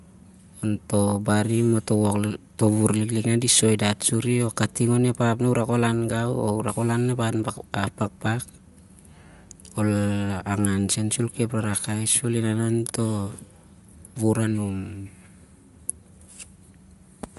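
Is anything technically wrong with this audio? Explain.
Yes. Throughout the speech there's a grainy, breathy edge and nothing above 11.6 kHz, likely from Bluetooth LC3 compression. The codec drops much of the upper spectrum and fills it with noise, and the plainly audible damage fits about 48 kbps with 10 ms frames.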